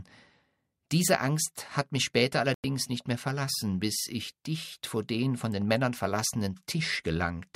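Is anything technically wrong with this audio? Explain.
Yes. From 2.54 to 2.64 s the speech abruptly drops to silence for about 0.1 s, after "hat mich später" and before "nicht mehr verlassen bis", and then picks up again. The sound in the gap is simply gone. This is a digital broadcast dropout: the receiver lost the signal or received frames that failed their checks and muted until good data returned. The gap is consistent with roughly three lost frames.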